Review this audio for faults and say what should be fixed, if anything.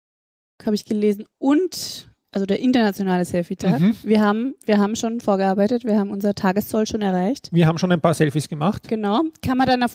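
No faults; nothing needs fixing.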